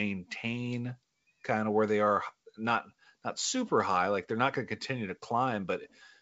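Nothing stood out on listening to this speech, which comes across as ordinary G.722 wideband telephone audio.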